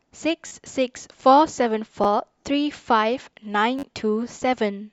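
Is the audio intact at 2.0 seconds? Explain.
No. At 2.04 s the speech catches on a tiny click, a sliver of sound heard twice with a hard join. This is a repeated buffer: new audio arrived late, so the device replayed its last block of about 10.7 ms, which fits a 512-sample buffer.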